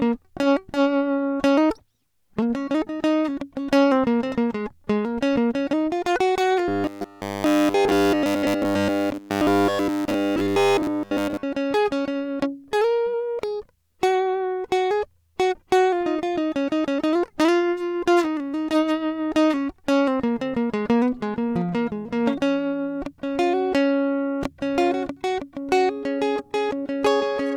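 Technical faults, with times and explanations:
6.68 to 11.43 s, robotic sound from repeated short buffers: the music becomes a rigid, metallic 100 Hz buzz throughout this stretch, likely because new audio arrived too seldom and a roughly 10 ms slice kept repeating, its period imposing that fixed pitch.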